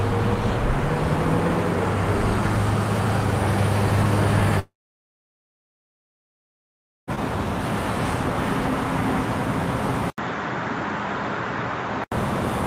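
A recording of everyday sounds with two faults. From 4.59 to 7.10 s a long network dropout likely occurs: a brief fading concealment tail, then about 2.4 s of silence, and the lost audio never returns. At 10.1 s an 80 ms gap precedes sound that is band-limited to 7.6 kHz, slightly quieter and carrying a faint new noise floor until 12.12 s, most likely an input switched to a poorer device.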